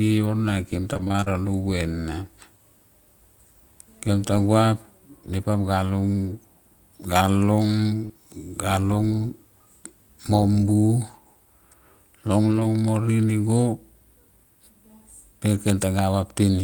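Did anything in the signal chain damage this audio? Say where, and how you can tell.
Yes. Repeated packet loss (robotic sound) runs from 0.93 to 1.30 s, and the damage happened on the network. Packets went missing or arrived late over and over across that span, leaving short holes of up to 24 ms and about 180 ms of lost audio in total. The receiver patched each hole by extending the preceding sound, so roughly half of this stretch is synthetic. That is why it sounds choppy, with fragments dropping out.

Short concealed packet loss occurs at 8.05 to 8.11 s, again a network fault. About 40 ms of the stream never reached the decoder in time. The decoder covered the hole by continuing the last sound, carrying its pitch forward where it was voiced and filling with shaped noise where it was not, then crossfaded back into the real signal. You hear it as a brief smear or wobble rather than silence.

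A lost packet rebuilt from error correction spans 12.51 to 12.65 s, where about 80 ms was reconstructed. The network dropped this audio, but the packets that followed carried low-bitrate backup copies, which is Opus in-band forward error correction, and the decoder played those copies instead. The evidence is that nothing goes silent, yet the passage turns rougher and noisier. That fits four separate 20 ms frames restored at reduced quality.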